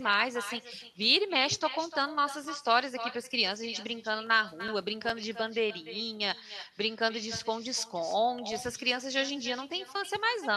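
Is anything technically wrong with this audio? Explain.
Yes, there are two faults. Throughout the speech there is echo with no canceller: the far end's loudspeaker feeds its microphone and nothing removes it, so every phrase returns roughly a third of a second later as a thinner copy about 12 dB below the speech.

Between 4.27 and 5.37 s, and again from 7.83 to 8.66 s, there are CD scratch ticks. A disc blemish destroys more data than error correction can rebuild, once per revolution, so the player patches or mutes those samples. The result is nine, then seven, brief clicks, each only a few milliseconds long.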